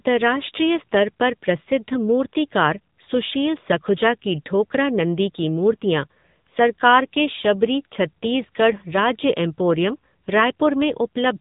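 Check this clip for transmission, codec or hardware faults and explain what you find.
One fault is present, and it runs for the entire clip: AMR narrowband mobile codec damage. The speech passed through the 8 kHz mobile coder, which cuts everything above about 3.8 kHz. Its vocal-tract model, driven by sparse pulses, leaves the speech plainly buzzy and synthetic, which points to a mode near 8 kbps.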